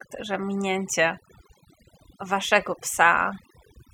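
From start to finish the speech carries overdone noise removal: a noise reducer set too hard kept cutting individual frequency bands it judged to be noise, taking softer speech detail with them. Gaps fall to near silence with twinkling specks. A spectrogram shows scattered isolated dots between phrases and ragged, holey harmonics.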